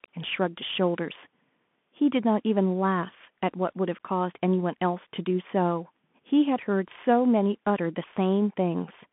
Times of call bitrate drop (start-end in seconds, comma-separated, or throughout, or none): none